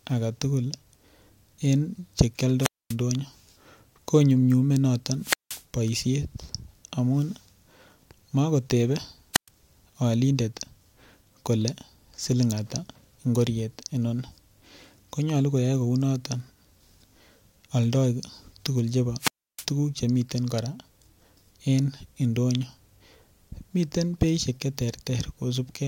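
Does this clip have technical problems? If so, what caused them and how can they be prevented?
Yes. Four wireless microphone squelch dropouts interrupt this speech: 2.58–2.96 s, 5.19–5.64 s, 9.33–9.49 s and 19.19–19.66 s. Each time the analogue FM radio link weakens, hiss rises briefly, then the receiver's squelch mutes the output, leaving a hole of near silence of about 240 ms, 180 ms, 120 ms and 310 ms respectively, before the speech returns. Keeping clear line of sight between transmitter and receiver antennas, using diversity receivers and fresh batteries, and scanning for a clean frequency prevents this.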